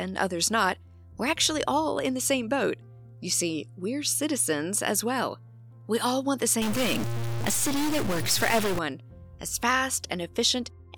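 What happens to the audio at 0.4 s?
Nothing goes wrong at 0.4 s, and the audio plays through that moment intact.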